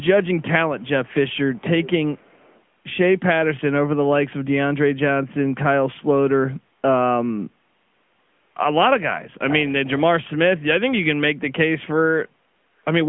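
From start to finish, the speech carries the sound of the AMR narrowband mobile codec. Nothing passes above about 3.6 kHz, and the line band runs roughly from 150 Hz to 3.4 kHz. The codec rebuilds the voice from a vocal tract model fed by a few pulses per short frame. At this rate the damage is plainly audible: a buzzy, synthetic edge, which fits a mid-range mode near 10.2 kbps. The call microphone's bass trimming sits underneath.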